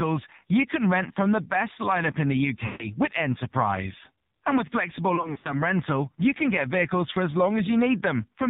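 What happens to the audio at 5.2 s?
From 5.16 to 5.61 s, lost AMR speech frames break up the speech. For each failed frame the decoder repeats the last good pitch and vocal tract settings at falling gain. The result is brief warbling dips, with the longest run near 60 ms, rather than the hard silent gaps or clicks of plain dropouts. This all sits on top of heavy, buzzy narrowband AMR coding at 5.9 kbps.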